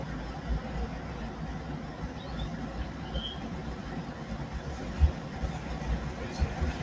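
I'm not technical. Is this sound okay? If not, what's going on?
No. Throughout the whole clip, a noise suppressor applied to music or sounds is turning down anything steady. The sharp starts of sounds come through, but held parts and their fading tails dip modestly, so it pumps. A plain volume change would lower everything evenly. The crispest top end also stops at about 8 kHz, which is what the call line passes.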